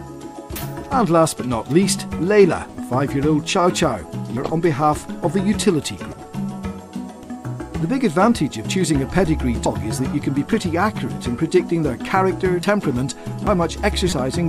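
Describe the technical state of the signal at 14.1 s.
Damaged data in the compressed stream from 14.09 to 14.12 s knocks the decoder out of frame sync, producing a brief glitch before decoding resumes.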